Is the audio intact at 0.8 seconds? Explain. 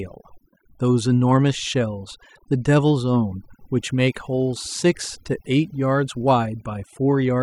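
No, not quite. Overdone noise removal runs through the whole clip, so 0.8 seconds is caught too. The denoiser is cranked hard enough that it shuts off bands sitting near its noise estimate, taking soft parts of the speech along. You get near-silent gaps with twinkly specks.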